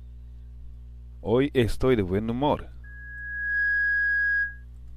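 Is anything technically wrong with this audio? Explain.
Yes. From 2.84 s to 4.65 s there is loudspeaker feedback squeal. The microphone picks up its own loudspeaker, and the loop gain tops unity at 1.7 kHz. The tone swells over roughly 0.7 s to about 5 dB above the sound. On a spectrogram it appears as a single bright horizontal line, and the waveform envelope climbs with it.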